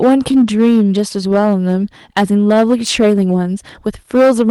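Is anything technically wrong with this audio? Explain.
Yes. The speech has two problems: it is hard clipped throughout, and there is clock drift between sender and receiver, which shows up as repeated timing corrections.

Hard clipping runs through the whole clip. The signal was driven about 11 dB beyond what one stage in the chain could carry, so every peak above that ceiling was sliced flat, affecting roughly one sample in twenty. Those squared-off tops add harmonics well above the speech band, so louder syllables carry a harsh, gritty fuzz rather than occasional crackle.

Clock drift between sender and receiver is also present for the full length. The sending device's clock runs about 2% slower than the receiving one, so the receiver's buffer keeps draining faster than it is refilled. To avoid running dry, the receiver has to make up the missing time again and again. The drift can't be heard directly. 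It comes through as the corrections described next.

The repeated timing corrections span from 0.04 s to 4.23 s. Because the slow sender leaves the receiver short, it keeps repeating brief pieces of audio, all in the same direction and at uneven intervals, so playback runs at about 98% of the original speed. Together these repeats add around a tenth of a second. Each one is small and, if heard at all, comes across as a slight hiccup or a faintly unsteady, dragging pace.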